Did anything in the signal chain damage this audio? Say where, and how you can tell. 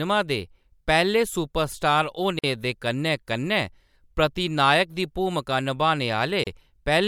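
Yes, there are gaps at joins of encoded pieces: silences at 2.39 s (about 47 ms) and 6.44 s (32 ms), four seconds apart. Each piece's encoder delay and padding weren't trimmed, so the speech stops abruptly and picks up where it left off.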